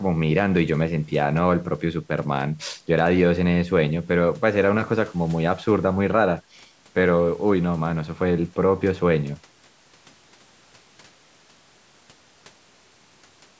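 No technical faults detected.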